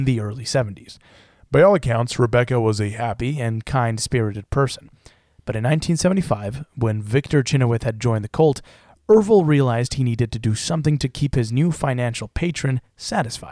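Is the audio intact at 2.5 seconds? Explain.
No. From 1.10 to 3.17 s a wrong sample rate slows the speech to 0.92 speed and drops pitch about 1.5 semitones, consistent with 24 kHz audio played at 22 kHz.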